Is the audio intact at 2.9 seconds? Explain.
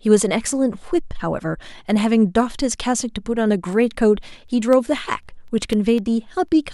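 Yes, the speech at 2.9 seconds plays through cleanly, with no dropout, click or distortion at that moment.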